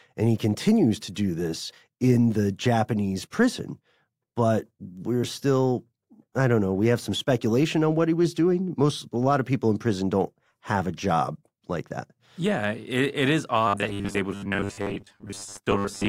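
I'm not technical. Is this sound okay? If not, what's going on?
No. From 13.68 s to the end, the speech turns into a stiff, metallic buzz while still loosely following what's being said. This is robotic sound from repeated short buffers: the likely cause is new audio arriving too slowly, so the software keeps replaying a tiny slice of about 10 milliseconds, which sets a steady 100 Hz drone. Roughly half of what you hear is repeated slices. Unlike a dropout, the sound never goes silent; it goes mechanical instead.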